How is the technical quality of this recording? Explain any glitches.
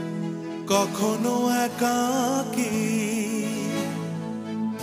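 No glitches are audible anywhere in the recording, so there is nothing technical to report.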